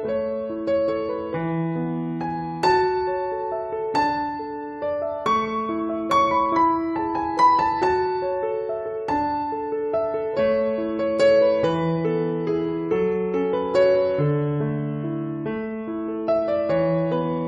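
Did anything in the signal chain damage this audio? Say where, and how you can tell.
No, I can't hear damage from any stage of the chain.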